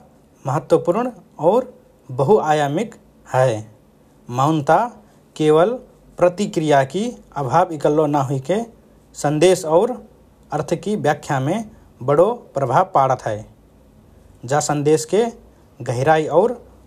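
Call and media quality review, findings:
Nothing stood out on listening to this speech recording.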